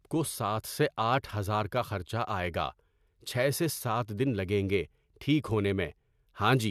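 Nothing technically wrong turns up anywhere in this speech recording, so there's no fault to point to and no cause to explain.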